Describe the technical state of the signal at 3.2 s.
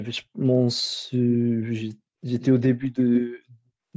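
Right at 3.2 s you're at the tail end of an echo leak that runs from 2.4 s. A delayed copy of the speech, trailing by about 157 ms and roughly 10 dB down, sits under the direct sound and dies away there. It's likely a loudspeaker on the far end whose echo canceller let part of the signal slip back into the call. The copy is band-limited to 8 kHz, like everything else from the call microphone path.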